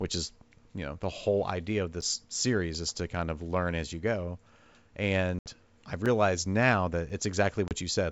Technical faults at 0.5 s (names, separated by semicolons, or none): none